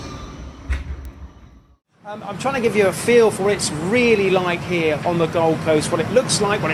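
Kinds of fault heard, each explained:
Bit error spike: one sample at 1.05 s got a bit flipped somewhere along the digital path, so its value jumps by a power of two and snaps straight back. You hear a single sharp tick peaking around -17 dBFS, broadband and unrelated to the surrounding sound.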